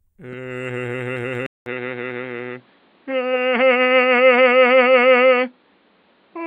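At 1.46 s the music cuts out for 200 ms, then returns dull to the end, with nothing above 4.7 kHz and a faint new hiss beneath it. The gap and fresh noise floor point to input likely switched to a poorer device, not simple filtering.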